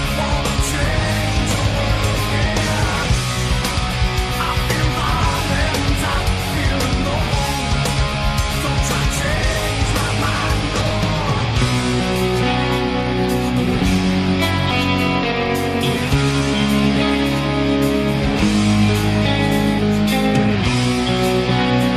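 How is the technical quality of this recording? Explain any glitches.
The recording has two brief glitches, both frames out of order. At 9.51 to 9.56 s and again at 10.81 to 10.91 s, the sound turns into a garbled flutter. Adjacent blocks of about 23 ms, then about 46 ms, were decoded in swapped order, so each stretch plays with its halves exchanged. No time is lost.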